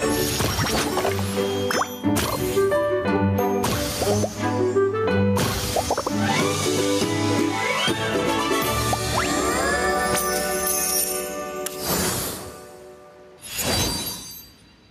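Gain pumping runs through the whole clip, with the level swinging by around 10 dB. The likely cause is input gain set far too high, with a fast limiter clamping down on every peak and squashing loud and soft parts together.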